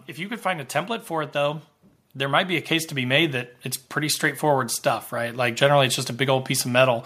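From 0.15 to 4.3 s there's automatic gain rising: the AGC decided the input was too quiet and pushed the level up about 10 dB, so speech and background swell together.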